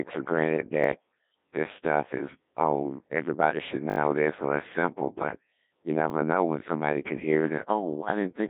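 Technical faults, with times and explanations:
Throughout: Codec 2 vocoder. The speech has the robotic, buzzy quality of a very low-rate vocoder, consistent with Codec 2 at about 1.6 kbit/s. Only pitch, voicing, energy and a coarse spectral envelope survive, and the decoder rebuilds the voice from sine waves, so the original waveform and breath detail are gone. On a spectrogram the energy sits between 200 Hz and 3.7 kHz, with unnaturally regular harmonic stripes and a hard, empty ceiling above 3.8 kHz.
0.84–0.86 s, 3.9–3.98 s and 6.1–6.12 s: repeated buffer. At each point fresh audio arrived late, so the playback device replayed the last block. The repeat length fits a 20 ms buffer. It plays once extra at 0.84 s and 6.1 s, which gives a brief click-like buzz, and four times extra at 3.9 s, which gives a short stutter. The waveform shows identical 20 ms segments butted together with hard joins. 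The spectrogram shows matching vertical slices with sharp edges, and no audio appears to be skipped.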